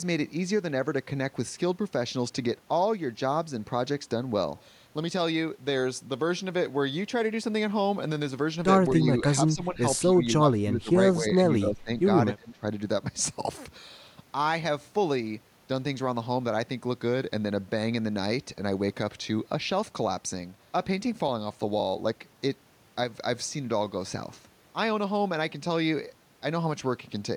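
Speech whose level repeatedly sags at 9.02–9.81, 10.09–10.22, 10.38–10.96, 11.18–11.37, 11.6–11.9 and 12.36–12.65 s, by anywhere from a few dB to some 25 dB, likely speech suppressed in double talk, with an echo canceller ducking the talker against the far side. The waveform shows pinched envelope gaps, and the spectrogram shows faded vertical bands.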